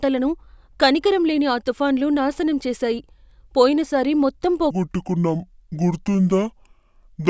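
From 4.71 s to the end, right after "నాశనం చేసాయి పోయినసారి మొత్తం", a wrong sample rate sets in. The speech slows to two-thirds speed and drops about 7 semitones, sounding deep and dragging, which fits 24 kHz audio played at 16 kHz. On a spectrogram, the harmonics sit lower and stretch out in time.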